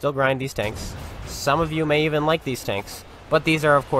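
No technical faults can be heard anywhere in the recording, and the signal holds steady from its first moment to its last.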